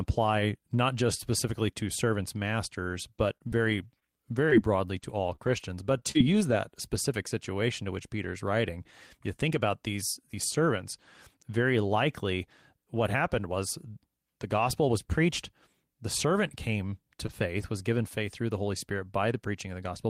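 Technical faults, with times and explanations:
2.93–6.55 s, scattered short gaps: Right after "just specifically to servants" and running up to "specific situation to which", the speech picks up about seven little dropouts, the longest around 30 ms. Around 140 ms went missing in total. The receiver papered over each hole by extending the last bit of sound and easing back in, so only about 4% of the stretch is patched. You hear it as odd ticks, slight smears and tiny hiccups.
17.27–17.30 s, short concealed packet loss: Just after "servant came", about 20 ms never arrived in time, and the decoder filled roughly 18 ms of it by continuing what it had just played. A voiced sound carries on from its pitch and an unvoiced one turns into shaped noise, then it blends back into the real signal. It comes across as a quick smear or wobble, and a short consonant there can go missing.
17.28–17.30 s and 17.60–17.62 s, lost packet rebuilt from error correction: Two separate 20 ms packets were lost. 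Each time the following packet carried a low-bitrate backup copy (Opus in-band forward error correction), and the decoder played that copy, so there's no gap. The first one overlaps the concealed loss above. Those two moments sound a bit rougher and noisier than the surrounding speech because the copy holds less detail than the original.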